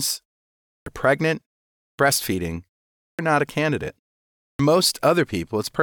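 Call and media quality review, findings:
Output device sleeping during silences, slow to wake or relock: clipped start after a pause. Onsets at 0.66, 1.79, 2.98 and 4.38 s lose about 0.19–0.21 s each after 0.37–0.49 s gaps. Speech resumes abruptly, first sounds missing.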